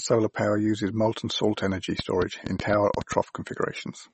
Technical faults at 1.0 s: MP3 compression

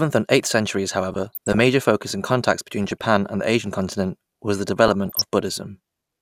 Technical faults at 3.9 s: none

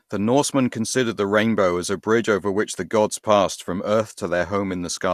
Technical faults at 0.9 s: none

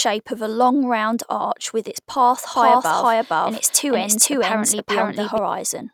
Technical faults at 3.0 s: doubled audio track

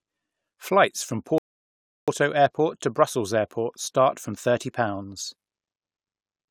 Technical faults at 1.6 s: rebuffering stall

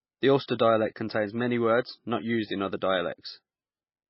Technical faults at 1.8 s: MP3 compression

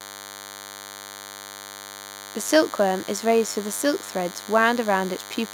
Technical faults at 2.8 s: DECT cordless phone buzz

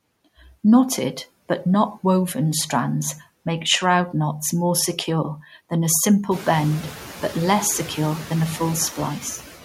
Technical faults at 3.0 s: noise suppressor artifacts; block of digital silence

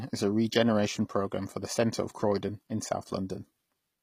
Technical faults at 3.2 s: HE-AAC compression

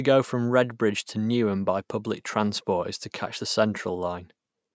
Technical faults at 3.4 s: none

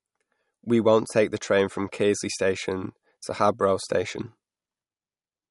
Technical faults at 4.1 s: MP3 compression

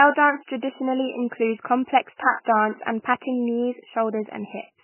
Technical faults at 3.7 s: MP3 compression

